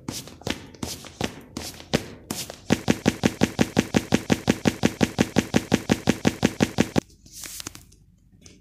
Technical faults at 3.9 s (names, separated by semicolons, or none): broken-record loop